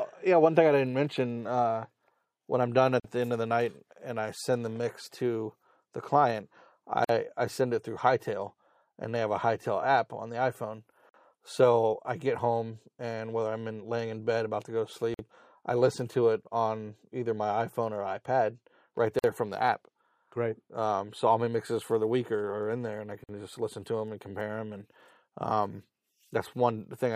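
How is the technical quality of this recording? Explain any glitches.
There's one recurring glitch, a gap at a join of encoded pieces, at 3.00, 7.04, 11.09, 15.14, 19.19 and 23.24 s. Chunks encoded separately were joined untrimmed, so each one's start delay and end padding stay in. Every 4 s, a gap of about 45 to 49 ms cuts in with smeared edges, then the sound carries on.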